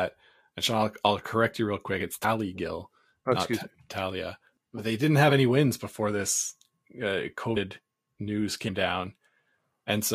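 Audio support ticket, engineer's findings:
Compressed frames skipped at 2.23 s, 5.30 s (between "they didn't" and "any wins before this"), 7.56 s (after "wins before this uh") and 8.67–8.69 s. Audio jumps ahead about 100, 20, 100 and 70 ms, consistent with one to several whole frames dropped by the file or the decoder.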